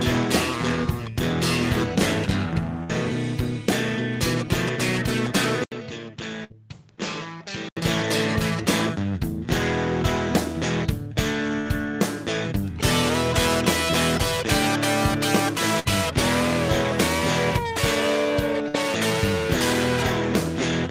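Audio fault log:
2.83 s, 6.44 s, 11.6 s, 15.79 s, 18.68 s: burst of packet loss. Each is a gap of about 60 ms where the receiver stretches the last sound into a fading hold for roughly 55 to 60 ms, then playback resumes with about 60 ms of audio missing.
5.64 to 7.77 s: input switched to a poorer device, likely. An 80 ms silence precedes a duller band with nothing above 7.6 kHz, about 10 dB lower level and a new noise floor around 45 dB down, before the fuller sound returns.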